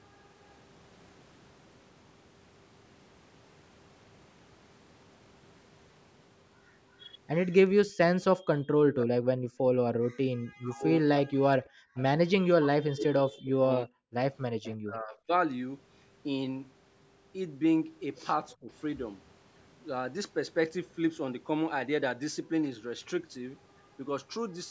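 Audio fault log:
8.37–9.71 s, 10.58–11.59 s, 12.58–15.32 s and 18.59–18.69 s, speech suppressed in double talk: the voice sinks by roughly 40 dB in pieces, about 20 dB in the last, likely because the echo canceller ducked it while the far side spoke. The waveform shows chopped, collapsed envelopes, and the spectrogram shows harmonics fading in patches.
9.99–10.30 s and 11.87–11.95 s, background gated by the echo canceller: the room sound drops by about 40 dB while loudspeaker audio plays, then returns when the canceller releases. The waveform shows near-silent gaps in the noise floor, and the spectrogram shows the background texture cut out in clean vertical blocks.
11.95–12.02 s and 14.66–14.76 s, echo leak: brief delayed scraps, 341 ms behind and about 25 dB below the speech, likely left by incomplete echo cancellation. The spectrogram shows faint shifted copies of earlier harmonic patterns, and the waveform shows small low-level bursts.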